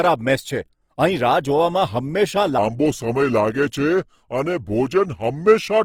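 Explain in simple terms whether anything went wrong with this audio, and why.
Two things went wrong. The whole clip was likely squeezed by Opus compression, which fills in lost detail with noise, so the speech sounds grainy, rough and noisy throughout. From 2.58 s to the end, a section at the wrong speed plays back at about 0.8 times normal, likely because a player used the wrong clock, so the voice drops roughly four semitones and drags slow and deep.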